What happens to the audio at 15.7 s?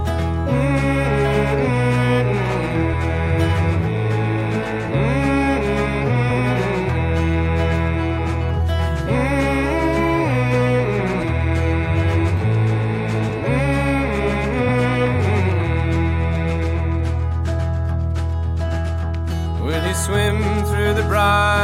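Nothing goes wrong at 15.7 s; the audio plays through that moment intact, with no dropout, glitch or distortion.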